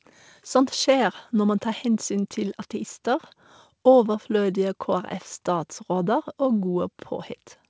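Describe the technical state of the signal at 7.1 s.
At 7.1 s the speech comes through intact, carried over a G.722 call path whose band ends at about 8 kHz, with no fault present at that moment.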